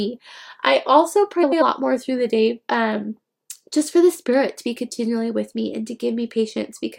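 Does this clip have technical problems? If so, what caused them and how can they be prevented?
Yes. Between 1.42 and 1.63 s, after "I also" and before "more through the day", frames out of order: two adjacent blocks of about 93 ms, consistent with runs of four frames, play swapped, causing a garbled flutter with no lost time. Prevent it by reordering packets on sequence numbers in the receive buffer before decoding.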